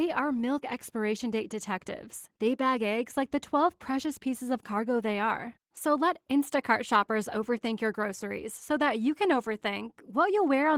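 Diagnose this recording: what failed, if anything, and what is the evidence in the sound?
The codec stage is at fault: Opus voice compression damages the speech plainly throughout. Voiced sound is hoarse and slightly robotic. That fits hybrid mode at 16 kbps, with SILK coding below 8 kHz and CELT above, both starved of bits.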